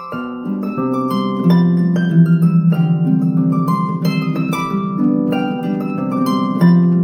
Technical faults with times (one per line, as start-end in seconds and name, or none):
5.04-6.94 GSM signalling bursts